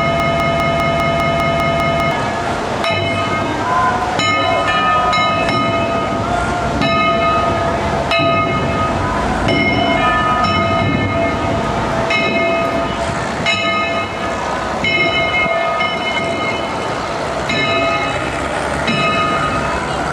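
Right from the start, through about 2.11 s, there's a broken-record loop: a 200 ms fragment repeats back to back, likely a stalled stream resending its last buffer.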